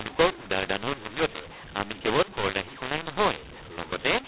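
From start to finish the speech carries a mu-law and A-law mix-up: samples coded with the A-law curve are expanded as if they were mu-law. The two logarithmic curves map each 8-bit code to different amplitudes, so levels come out scrambled. The speech turns harsh and gritty, and the smallest codes land well above zero, filling pauses with hiss. The band stops near 4 kHz, which fits 8 kHz G.711 telephone coding underneath.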